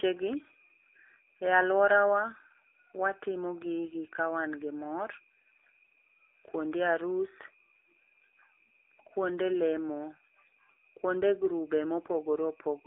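From start to finish the speech carries AMR narrowband mobile codec damage. Everything passes through a 300 Hz to 3.6 kHz telephone band, and the plainly audible buzzy, synthetic texture points to a low AMR-NB mode of roughly 7.4 kbps, where too few pulses are left to rebuild the vocal-tract excitation. On a spectrogram the energy stops at a flat ceiling at 3.6 kHz and the band below 300 Hz is empty.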